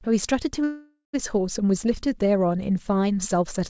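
A call audio freeze interrupts this speech clip from 0.64 to 1.15 s. The sound stalls into a fading fill with about 0.11 s of silence, likely from a jitter buffer running dry, then resumes intact 0.5 s late. The call path, which fits G.722 at 64 kbps, carries nothing above 8 kHz.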